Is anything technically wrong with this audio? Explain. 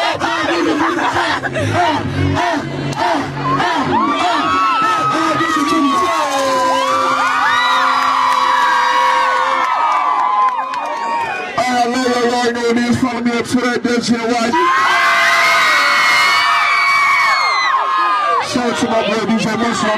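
Yes, one problem. At about 14.49 to 14.54 s the sound jumps abruptly ahead with a blip, likely a stream segment skipped: one chunk failed to load and playback carried on without it.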